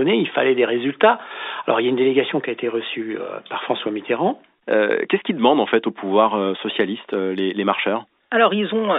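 No technical faults are audible in the speech: the G.711 A-law telephone coding behaves as that format should, with the sound confined to roughly 250 Hz to 3.7 kHz and any coding noise held low under the signal.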